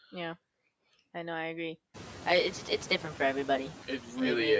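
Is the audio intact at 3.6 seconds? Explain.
No. At 3.6 seconds the sound is hollow and phasey, with a fixed coloration. This is channel delay (comb filtering), present from 2.29 s, just after "I know I agree", to the end. One channel lags the other by roughly 10 ms. When the two are summed to mono, shared content cancels at evenly spaced notches starting around 40 Hz.

Noise suppressor artifacts are also present at this moment, as they are throughout the clip. The suppressor pulls down the bands it judges to be steady noise, by about 15 dB, frame by frame. The room noise has risen since about 2 s, and the leftover noise pumps between and under the words.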